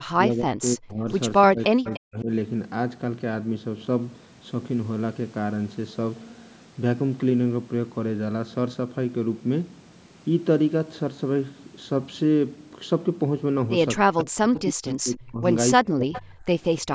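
From the start to 1.07 s, and again from 1.48 to 2.29 s, the speech dips sharply, by around 40 dB at its deepest, in a pattern of speech suppressed in double talk. The most likely cause is an echo canceller facing simultaneous talk from the far end. It cannot separate the local talker from loudspeaker echo, so it attenuates everything. Inside the second dip, at 1.87 to 2.00 s, a faint delayed copy surfaces, roughly 20 dB under the speech and 295 ms behind it. This is echo leak, likely from a loudspeaker endpoint whose canceller let part of the microphone pickup back through.

The same pairing returns near the end. Double-talk suppression cuts the speech from 14.03 to 15.43 s, by around 40 dB, and from 15.83 to 16.42 s, by around 35 dB. At 16.13 to 16.20 s another brief echo leak appears, again 295 ms late and louder this time, roughly 15 dB below the speech. Throughout the clip, the normal call microphone processing limits the band to 8 kHz.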